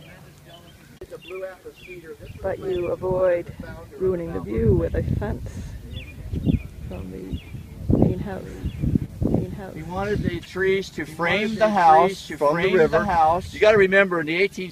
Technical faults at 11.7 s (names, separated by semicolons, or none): doubled audio track